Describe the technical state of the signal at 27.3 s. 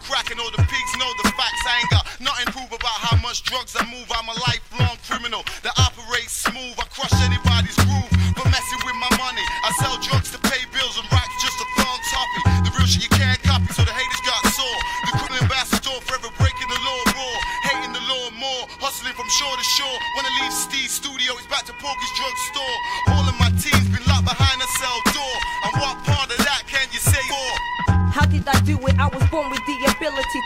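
A brief glitch from 27.26 to 27.32 s comes from damaged data in the compressed stream, where corrupted bytes made the decoder misread frames and lose sync.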